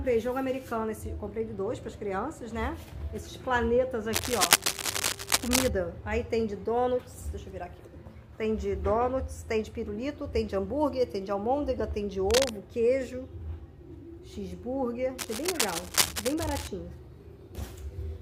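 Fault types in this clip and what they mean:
Cable scratch noise: a worn cable, connector or control was likely being moved, so its contact resistance jumped erratically and added dense, irregular bursts of noise to the signal. It shows as scratchy rustling over the sound from 4.13 to 5.69 s, somewhat louder than the audio itself. It comes back briefly at 12.29 to 12.49 s and again from 15.18 to 16.69 s, both times at roughly the audio's own level.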